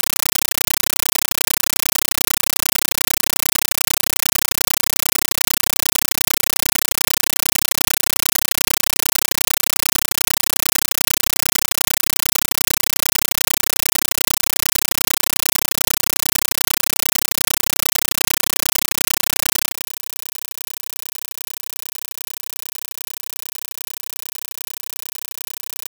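From start to finish, the speech is replaced by a compressed stream played as audio. An AC-3 bitstream has been passed to the output as if it were ordinary PCM samples, with no decoding. Each coded frame comes out as a 9.33 ms burst of noise followed by silent padding, repeating at 31.25 Hz. The result is a harsh, very loud chattering static, and the burst density fits a 448 kb/s stream.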